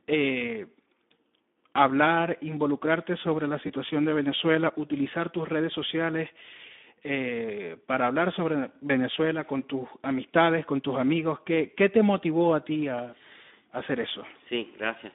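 Speex codec damage runs through the whole of this speech clip. The sound is confined to a telephone-style band of about 200 Hz to 3.6 kHz, and within it the voice sounds noisy and hoarse. That texture fits a low setting of around 11 kbps, where the CELP coder has too few bits to model the excitation and substitutes a rough approximation for the natural voicing. VoIP packet loss concealed by the speech codec appears at 3.67–3.72 s, right after "hablar involucrarte sobre la", and again at 8.87–8.91 s, between "eh para hablar sobre" and "con tus amistades con". Each gap sounds like a single missing 20 ms frame. The decoder fills it by extending the previous pitch and filter at falling gain, so a short stretched, fading sound replaces the sound there, and the voice stays weakened and distorted for a few tens of milliseconds until the decoder's state recovers.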